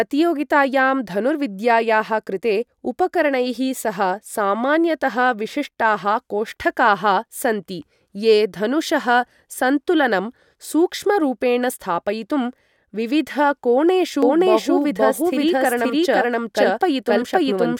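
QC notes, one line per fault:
14.23 s to end: doubled audio track. A second full-band copy of the speech starts abruptly and runs about half a second behind, at roughly the original's level, with no decay or room colour. This is likely a second capture through a slower path.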